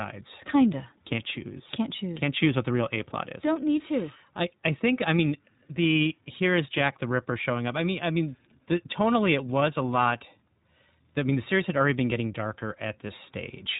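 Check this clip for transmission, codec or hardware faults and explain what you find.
The clip carries iLBC codec damage for its full length. The speech is band-limited to below 4 kHz and sounds plainly rough and synthetic. iLBC codes each frame's excitation independently, here in short blocks consistent with 20 ms frames at roughly 15 kbps, so fine spectral detail and smooth frame-to-frame continuity are lost.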